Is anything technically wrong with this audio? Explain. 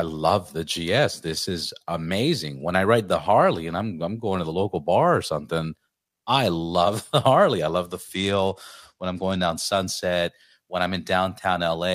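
Yes. From 7.84 to 9.66 s the speech turns dull in the treble and picks up a gritty noise, then recovers. This is a Bluetooth SBC bit pool drop. The sound fits a link cut from a bit pool of 28 to 12, about 96 kbps, leaving the upper sub-bands starved and the rest coarsely quantised.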